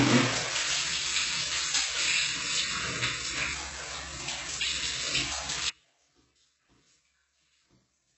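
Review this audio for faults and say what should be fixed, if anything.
HE-AAC compression, heavy and throughout: the top end stops dead at 8 kHz, and the treble below that cutoff sounds gritty and metallic rather than natural. This is likely spectral band replication at work. The codec spends its few bits on the low band and fakes the upper band by copying lower content upward under a coarse envelope, so the rebuilt harmonics don't line up with the real ones. The depth of the damage fits a rate near 8 kbps. Encode at a far higher bitrate, or with plain AAC, to prevent it.

Audio dropout to a faint residue, from 5.70 s to the end: the sound cuts out abruptly at 5.70 s and never returns. What remains is only a faint sound, around 35 dB below the normal signal level. This is not a pause or a fade. The sudden change points to the source feed being lost while the path after the break stayed live, which is likely what happened here, so only a faint residue got through. 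Secure the source connection and monitor the feed during capture to prevent it.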